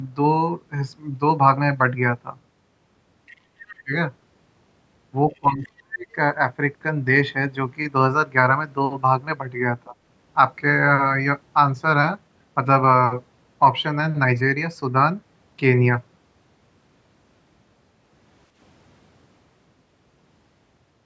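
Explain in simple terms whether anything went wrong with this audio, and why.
Other side's voice leaking through, at 3.26–3.37, 3.68–3.75, 5.31–5.36 and 5.63–5.68 s: faint scraps of a second voice, likely loudspeaker sound the echo canceller failed to remove.

Speech suppressed in double talk, at 3.84–3.92, 5.38–6.07 and 9.88–9.96 s: the speech dips, almost vanishing from 5.38 to 6.07 s, likely because both sides talked together and the canceller muted both.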